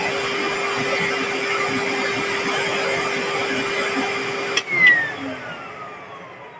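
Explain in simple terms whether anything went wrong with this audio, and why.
Nothing went wrong with this audio; it simply passed through a call's microphone processing, which trims the deepest bass and leaves nothing above 8 kHz, and that is normal.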